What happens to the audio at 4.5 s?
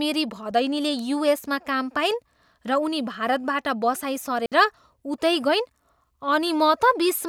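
At 4.46 to 4.52 s the speech drops out for 60 ms: a digital wireless dropout, where the receiver loses too much data and mutes with a very short fade. It sounds like a clean gap without clicks or noise bursts, and appears as a flat, empty band across all frequencies.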